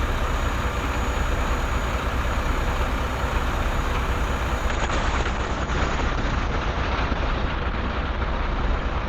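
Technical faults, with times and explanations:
4.7–9.1 s, call bitrate drop: The sound turns muffled, rough and watery, with the top end gone, and stays degraded to the end; it is coarsest for about 2.67 s. The connection's bandwidth estimate fell, so the encoder was forced onto far fewer bits, a fall from around 64 kbps to roughly 9 kbps. It codes more crudely and narrows its audio band from 20 kHz to 8 kHz, which removes the brightness.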